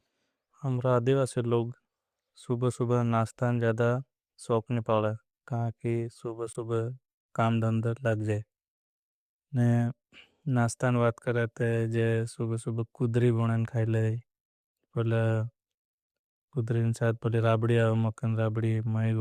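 At 6.53 s the speech drops abruptly into a silent gap lasting about 34 ms, until 6.56 s, with timing intact afterwards. This is a corrupt frame muted: flipped bits left a compressed frame undecodable, the decoder rejected it, and the player substituted silence, a length that fits one lost frame.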